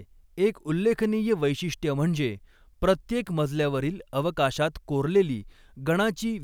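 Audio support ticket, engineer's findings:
No faults found in playback.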